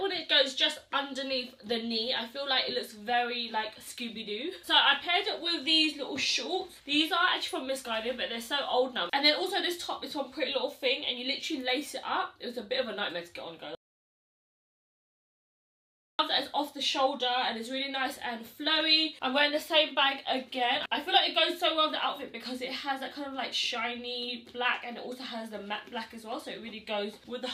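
From 13.75 to 16.19 s the sound cuts to total silence, no room tone, for about 2.4 s: an audio dropout to silence, likely from a lost input.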